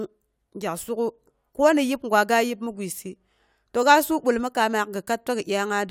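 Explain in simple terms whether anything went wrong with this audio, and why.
Nothing went wrong here.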